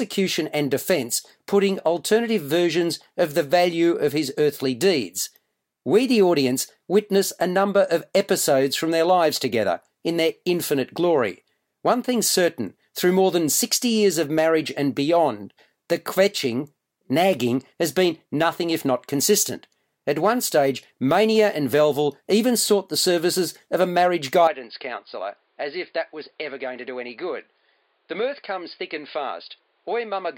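At 24.48 s the speech suddenly goes duller and drops in level by roughly 10 dB, staying that way to the end. Nothing reaches above 5 kHz and a new, faint noise floor creeps in well under the voice, with no gap at the change. That's most likely an input switched to a poorer device mid-recording.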